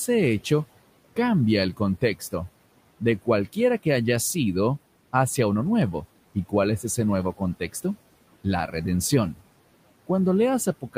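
All through the speech there are noise suppressor artifacts: the room noise, about 20 dB down, gets cut about 18 dB between words, then pumps back up underneath them.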